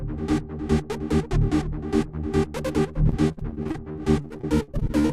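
From about 3.09 s right through to 5.11 s there's repeated packet loss, giving that robotic sound. Around twenty holes open up, each patched by stretching the last bit of audio (gaps up to 54 ms), so roughly a quarter of that stretch is filler. It comes out choppy, with pieces missing.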